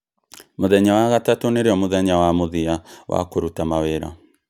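No technical faults can be heard anywhere in this speech recording. Nothing in the signal chain stands out as having gone wrong at any point.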